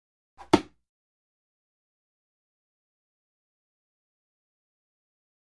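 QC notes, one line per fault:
No faults to note.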